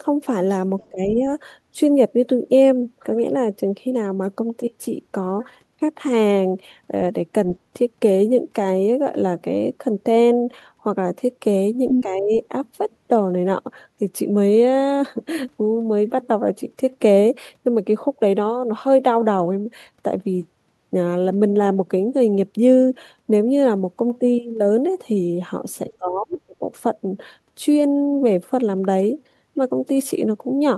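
Speech, with two kinds of echo-control fault. The other side's voice leaking through shows up twice: a faint 70 ms scrap at 0.81 to 0.88 s, about 35 dB under the talker, and a louder burst at 11.89 to 12.04 s at roughly the same level as the speech. The likely cause is a loudspeaker echo the canceller failed to remove from the microphone. On a spectrogram these appear as brief foreign harmonic traces laid over or beside the talker's own pattern. Speech suppressed in double talk follows each leak and occurs once more: 0.89 to 1.23 s, dipping by about 20 dB; 12.02 to 12.32 s, by about 15 dB; and 25.97 to 26.63 s, the deepest at about 30 dB over around half a second. The likely cause is the canceller ducking everything when both sides spoke at once. In the waveform the envelope sags or gaps abruptly, and on a spectrogram the upper bands thin or blank out in patches.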